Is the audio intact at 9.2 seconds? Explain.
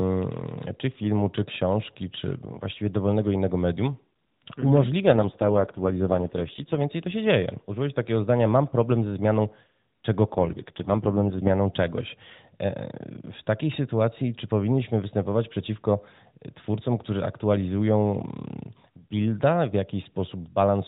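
Yes, the speech is intact at 9.2 s, with nothing at that moment beyond the light, band-limited character of the AMR narrowband mobile codec it passes through.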